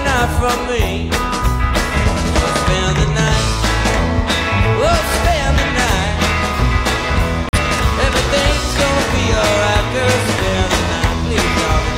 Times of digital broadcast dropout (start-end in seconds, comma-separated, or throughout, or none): 7.49-7.58